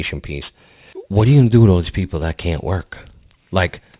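From start to finish the speech carries aliasing: the rate came down without an anti-alias filter, which fits a drop from 48 kHz to 8 kHz, so energy above 4 kHz folds back as unrelated gritty tones, roughly 25 dB under the signal, roughening the sibilants.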